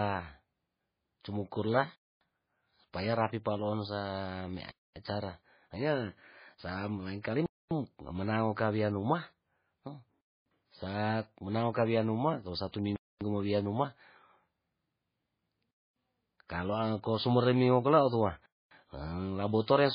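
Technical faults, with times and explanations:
Throughout, MP3 compression: the sound is heavily watery and swirly, with nothing above 5 kHz. This is likely MP3 coding at a very low rate, fitting about 16 kbps. Starved of bits, the encoder drops weak frequency lines frame by frame and cuts the treble.
1.96–2.21, 4.71–4.96, 7.46–7.71, 10.21–10.46, 12.96–13.21, 15.71–15.96 and 18.46–18.71 s, gap between chunks: each hole lasts 250 ms, and they recur every 2.75 s. That pattern fits 2.5 s chunks with silence inserted at each join. No sound is lost, but the flow is interrupted.
7.22–7.24 and 12.72–12.74 s, pre-echo: a short hiss runs ahead of a sharp attack, for 29 ms the first time and 20 ms the second. The transform codec spreads its quantisation noise across the whole block, so the quiet moment before each attack fills with noise and the onset sounds smeared.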